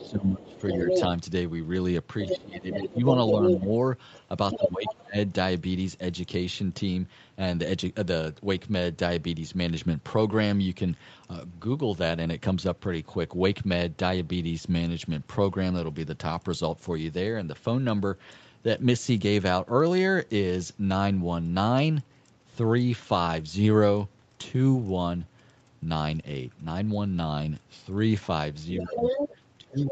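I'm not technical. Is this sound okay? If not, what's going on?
No. Twice at the start and once at the very end, the talker's voice dips sharply or breaks up. This is speech suppressed in double talk, likely because the call's echo canceller turned everything down while both sides spoke at once. It happens at 0.0 to 0.88 s, 2.36 to 5.17 s, and from 28.82 s to the end.

At nearly the same moments, a second voice about as loud as the talker comes through: 0.0 to 1.04 s, 2.21 to 4.93 s, and 28.78 s to the end. This is the other side's voice leaking through, likely from the loudspeaker being picked up again by the microphone.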